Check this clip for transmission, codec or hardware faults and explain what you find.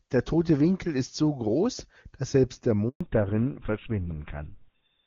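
Two transmission faults are audible, and they are linked.

A handover gap runs from 2.89 to 3.01 s. The speech stops for 120 ms. The call was passed from one network to another, and no speech frames arrived during the switch. The sound fades out within a few tens of milliseconds and stays silent until the new link carries audio again. Whatever was said in that stretch is gone, not muted.

A fallback to narrowband follows at 3.01 s and lasts to the end. Before it, the AMR wideband (HD Voice) codec carries the speech cleanly, with faint or no coding damage. That fits its top rate of about 24 kbit/s. After the switch, nothing remains above 4 kHz. The sibilants lose their edge, and the speech turns duller and rougher. The sound points to GSM full rate at 13 kbit/s.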